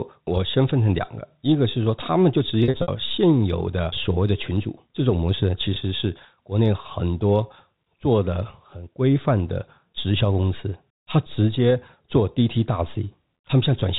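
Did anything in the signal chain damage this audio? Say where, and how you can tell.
Yes, the network stage lost packets, and the receiver patched the gaps with pitch repetition. From 2.64 to 2.88 s about 160 ms goes missing in bursts over 240 ms, the longest run 60 ms, which fits 20 ms packets. You hear a held, buzzy smear that starts to fade before the sound cross-fades back. At 5.74 to 5.76 s a single 20 ms dropout gives a brief buzzy hold. The G.711 telephone band underneath is just the line.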